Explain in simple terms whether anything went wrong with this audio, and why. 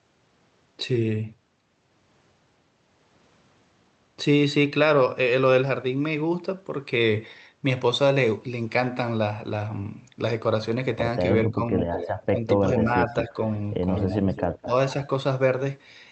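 The speech briefly dips around 11.46–11.72, 12.28–12.67, 12.85–13.35 and 14.64–14.72 s. This is speech suppressed in double talk, likely from both sides talking at once.

A repeat of the speech, about 0.2 s late, creeps in at 11.93–12.09, 12.74, 13.10–13.27 and 13.96–14.65 s. This is an echo leak, likely loudspeaker sound that the loudspeaker side's echo canceller missed.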